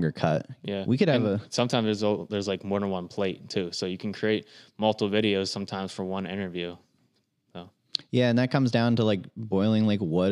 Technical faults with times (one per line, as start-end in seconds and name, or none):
none